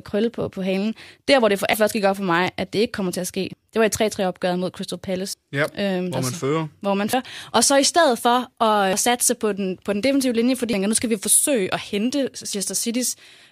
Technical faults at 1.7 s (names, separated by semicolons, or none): audio missing between chunks